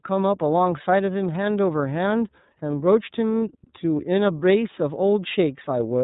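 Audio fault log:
Throughout: iLBC codec. The speech is narrowband, with nothing above 3.8 kHz, and plainly rough and synthetic, the excitation of each 30 ms frame coded on its own at a rate fitting 13.33 kbps. A spectrogram shows a hard ceiling near 3.8 kHz with blurred, frame-blocky harmonics.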